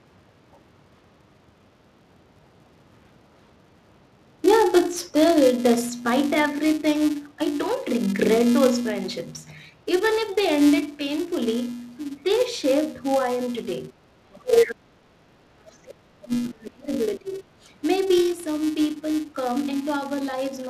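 A steady buzz at 375 Hz runs through the whole clip, rising and falling with the level of the speech. This is a filter restarted on every block: it loses its state and starts each block from silence, leaving a tiny transient every 128 samples.

From 11.8 to 17.48 s the speech dips and breaks up in pieces, losing as much as about 35 dB, for roughly three seconds in total. The likely cause is speech suppressed in double talk: with both sides talking, the echo canceller turned the talker down along with the echo.

Between 13.95 and 14.07 s the room sound briefly sinks by about 9 dB, then comes back. This is background gated by the echo canceller, which clamped the microphone while the loudspeaker was playing and released it moments later.

From 14.33 to 16.45 s a second voice comes through, sitting around 5 dB above the talker's speech. This is likely the other side's voice leaking through: the far end played from the loudspeaker was not fully removed from the microphone signal.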